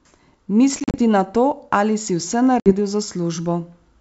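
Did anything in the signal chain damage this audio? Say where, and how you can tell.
Yes. Packet loss on an ADPCM call, a network fault: hard silent holes at 0.80–0.97 s, before "na to ali si", and 2.60–2.72 s, after "to ali si vse". After each hole the speech returns slightly distorted while the decoder's predictor resynchronises.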